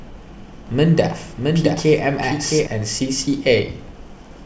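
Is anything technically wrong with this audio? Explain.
Yes. From 0.67 to 2.67 s there is a doubled audio track. A dry copy trails about 0.7 s behind, somewhat quieter, likely from a second, slower capture path.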